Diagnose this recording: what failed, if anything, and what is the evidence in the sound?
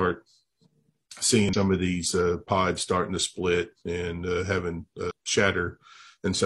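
The compressed stream carries damaged data, a codec-stage fault. A short glitch breaks the speech from 1.49 to 1.55 s, just before "of these uh pods". Another from 5.07 to 5.11 s follows "split and uh having". The decoder misreads corrupted frames and loses sync.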